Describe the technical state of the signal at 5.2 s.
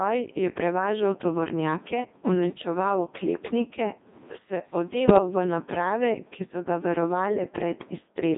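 Just before 5.2 s, from 5.06 to 5.18 s, the voice breaks into a brief warbling bleep with jumps in pitch and level. These are bit errors on digital voice radio: flipped bits, roughly one in twenty, corrupted what sounds like about three vocoder frames. Each frame resynthesised with the wrong pitch, energy and spectral settings.

Underneath, the voice sounds robotic and buzzy within a 150 Hz to 3.7 kHz band. That is the Codec 2 vocoder rebuilding speech from sine waves rather than keeping the waveform. The damage is heavy, consistent with a rate near 2.4 kbit/s.

The gain also swings by about 15 dB, squashing loud and soft parts closer together. This is gain pumping, likely from a fast limiter reining in excessive input gain.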